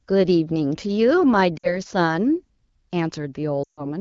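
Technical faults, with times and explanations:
1.57 to 1.80 s, lost AMR speech frames: about 60 ms of speech, roughly three 20 ms frames, fails its checksum and is concealed. The decoder repeats the last good pitch and vocal tract settings while lowering the gain, so the sound briefly smears and dips before recovering slightly rough.
3.64 to 3.85 s, lost AMR speech frames: a longer 140 ms run. The sound drops to near silence within two frames, as wideband concealment does.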